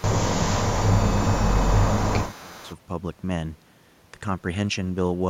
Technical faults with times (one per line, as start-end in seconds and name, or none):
0.00-0.04 echo leak
0.00-2.70 speech suppressed in double talk
2.24-2.74 echo leak